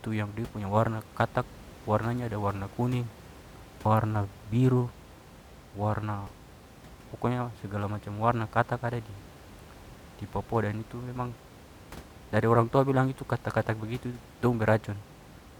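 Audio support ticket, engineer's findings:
Forward skips in the speech at 3.85 s (just before "warna biru"), 6.27 s and 14.42 s; no gaps, about 20 ms, 50 ms and 20 ms missing. Likely dropped buffer (overrun): capture read late, hardware overwrote samples, edges spliced. Room noise about 21 dB below speech.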